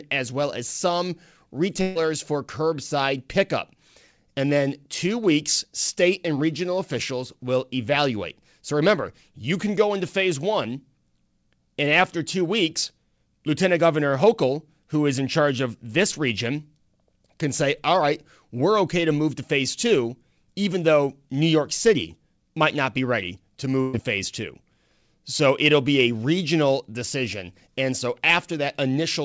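A burst of packet loss hits at 1.82 to 1.97 s and again at 23.81 to 23.95 s. Each time a short run of packets never arrived in time, so the receiver stretched the last sound it had, fading it over about 130 ms and then about 120 ms, before jumping ahead with roughly 140 ms and 120 ms of speech gone. The fill is heard as a brief held buzz or hiss, then an abrupt skip. Throughout, the audio stops at 8 kHz, which fits a G.722 call codec.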